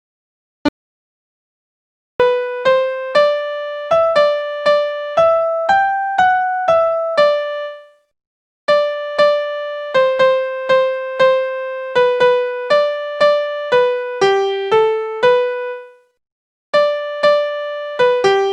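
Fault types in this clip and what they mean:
Audio dropout to silence: from 0.68 s to 2.20 s the signal cuts out mid-flow and returns abruptly, leaving about 1.51 s of silence with no room tone or noise floor underneath. Whatever sound occurred in that stretch is simply absent. The likely cause is the input being lost for that interval, through a disconnected device, a broken link or an accidental mute, while recording or encoding carried on writing silence.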